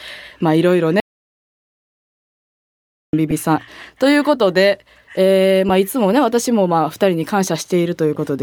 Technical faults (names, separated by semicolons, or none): audio dropout to silence; lost LE Audio frames